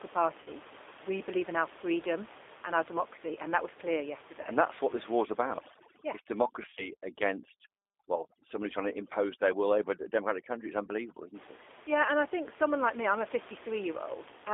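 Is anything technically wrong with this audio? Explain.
Yes, two problems here. The whole clip runs through a G.729 codec: the speech is squeezed into roughly 300 Hz to 3.6 kHz, and the rough, slightly synthetic texture is what you'd expect from an 8 kbit/s pulse-based coder rebuilding the voice. The codec damage is plainly audible, and the room noise sitting about 18 dB under the speech picks up some of that grain.

There's also VoIP packet loss concealed by the speech codec, in three spots: 0.42 to 0.49 s (about 40 ms missing), 4.42 to 4.48 s (about 20 ms), and 6.63 to 6.88 s, where about 100 ms drops out in bits spread over 140 ms, the longest gap 30 ms. The decoder fills each hole by repeating its last pitch and filter at falling gain, so you get a brief buzzy smear or coloured noise that fades, and the voice stays a bit weak for a moment after.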